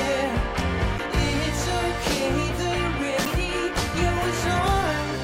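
At 0.96 to 1.00 s and again at 3.23 to 3.27 s, the audio shows damaged data in a compressed stream. Each break lasts about 44 ms. Part of the encoded data there was corrupted, so the decoder could not read those frames correctly, lost sync and searched for the next valid frame header before playback resumed. Each event comes through as a brief disruption of this kind, such as a chirp, squawk, click or short gap.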